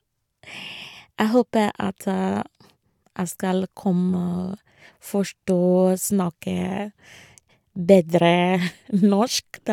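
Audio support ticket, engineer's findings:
No faults found.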